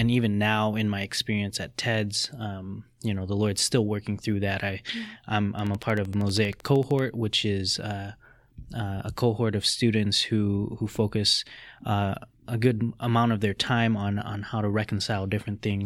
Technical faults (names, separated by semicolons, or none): train of clicks